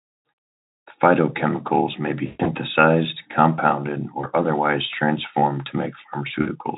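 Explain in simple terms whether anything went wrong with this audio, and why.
VoIP packet loss concealed by the speech codec: network packets went missing, so the decoder guessed the gaps, smearing the speech into a fading buzz or noise. This happens after "phytochemicals may be" at 2.26 to 2.51 s, just before "otherwise transformed to" at 4.21 to 4.26 s, and at 6.41 to 6.48 s.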